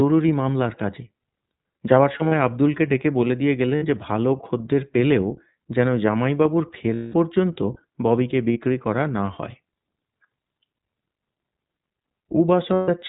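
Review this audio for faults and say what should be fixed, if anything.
The whole clip carries iLBC codec damage, plainly audible. Nothing above 4 kHz survives, and the speech has a rough, synthetic edge from coding each frame's excitation independently, which fits the 15.2 kbps, 20 ms mode. Unlike a plain low-pass filter, the grain comes from coding. To prevent it, use a wideband codec such as Opus where the link allows.

Lost iLBC frames appear at these points:
2.12–2.33 s, with 100 ms missing in short runs of about 40 ms at most
3.76–3.84 s, 60 ms
6.94–7.16 s, 200 ms
8.52–8.57 s, 40 ms
12.74–12.89 s, 140 ms

In each gap the decoder repeats the last pitch cycle with added noise, so the audio becomes a held, buzzy vowel that fades over the longer gaps. Unlike jitter-buffer dropouts, there is no silence, and the speech recovers almost at once. To prevent it, reduce packet loss with a better network path, or add forward error correction or redundancy.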